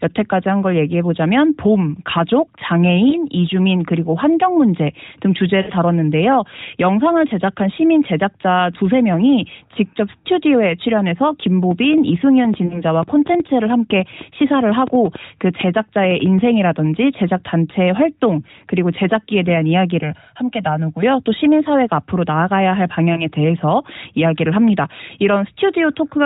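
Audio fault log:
3.10–3.16, 5.62–5.72, 12.66–12.82 and 23.14–23.29 s, lost AMR speech frames: short gaps, about 20 ms at 3.10 and 23.14 s, 60 ms at 5.62 s, 40 ms at 12.66 s. The decoder fills them by repeating the last good pitch and vocal-tract shape at falling gain, so you hear a quick dip or warble. The 60 ms run smears and fades before the sound comes back a bit rough.
11.46–16.40 s, train of clicks: roughly thirty similar pops at an uneven pace, averaging about 5.5 per second and peaking around 5 dB above the signal. They tick over the speech and the gaps alike. The likely cause is interference from nearby gear or a faulty connection or power supply injecting pulses.
20.03–21.03 s, channel delay (comb filtering): for that second one channel runs roughly 1.5 ms late, and summing to mono cancels the shared content at evenly spaced frequencies, with the first notch near 400 Hz. The speech goes hollow and phasey inside an already narrowband, 4 kHz-limited AMR-NB sound.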